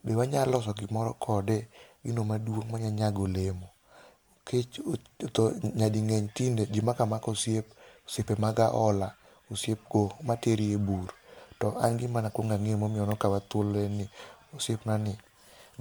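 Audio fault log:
Throughout: generation loss. The speech has a swirly, hollow smear, blurred consonant attacks and nothing above 20.1 kHz, likely from MP3 re-encoded about four times at roughly 97 kbit/s, each pass requantising on a fresh frame grid so noise and spectral holes stack up.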